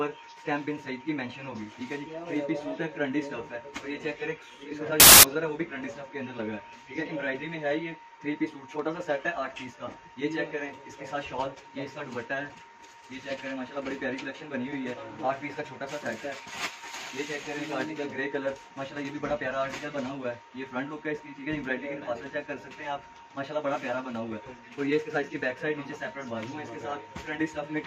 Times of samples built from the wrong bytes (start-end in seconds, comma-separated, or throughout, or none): 5.00-5.23